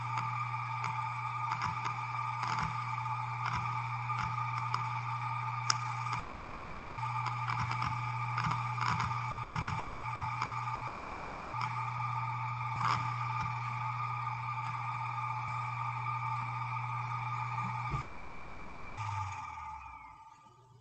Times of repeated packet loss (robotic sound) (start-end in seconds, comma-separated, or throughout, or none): 9.31-10.84